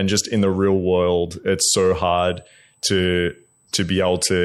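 Current drawn by the USB bus in 125-microsecond microframes is leaking into the audio path through power or ground, producing USB whine in this speech clip: a steady 8 kHz tone, roughly 40 dB below the speech, from 2.18 s, just after "real world it's so", to the end.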